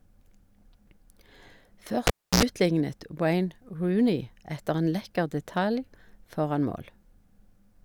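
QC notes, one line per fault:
2.07–2.43 s, cable pulled and plugged in: a pop as the live lead comes out, about 310 ms of near silence, then roughly 81 ms of 60 Hz mains buzz while only the plug tip makes contact, and a second pop as the sound returns.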